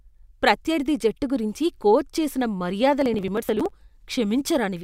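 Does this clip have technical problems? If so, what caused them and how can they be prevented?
Yes. After "జట్టు గురించి కోచ్ చేసిన", from 3.02 to 3.70 s, processor overload crackle tears the speech. The processor missed about twenty deadlines over that stretch on buffers of around 10 ms and skipped each one. On the waveform this shows as hard-edged dropouts, and on a spectrogram as vertical broadband streaks. Larger buffers or a lighter processing load prevent it.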